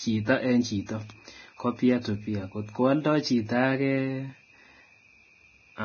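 Speech with heavy Vorbis compression throughout, likely from a low-bitrate Vorbis encode, with damage that fits about 18 kbps. A spectrogram shows a hard ceiling at 6.5 kHz. Below it, the treble is turned into grainy, hissy noise patches, and attacks are smeared.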